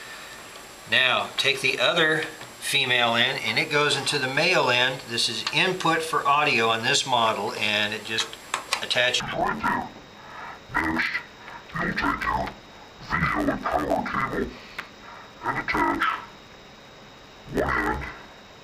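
From 9.20 s to the end at 18.63 s, the audio is hit by interleaved audio read as planar. Each block of alternating left and right samples is split in half, with the first half taken as one channel and the second as the other, and both halves play together at half speed. The blocks here last about 11.61 ms, which fits a 512-sample buffer, so the sound turns dull and robotic and buzzes at about 86 Hz, with no clear octave shift.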